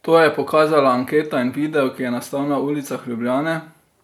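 No technical fault can be heard anywhere in the speech. Nothing interrupts or disturbs the audio at any point.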